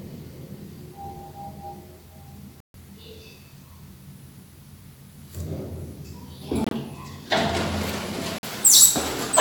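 Damaged compressed frames were rejected by the decoder and replaced with silence, a corrupt frame muted fault, at 2.60 to 2.75 s, 6.64 to 6.73 s and 8.38 to 8.45 s. Each gap cuts in abruptly, spanning what sounds like a few frames, with timing preserved.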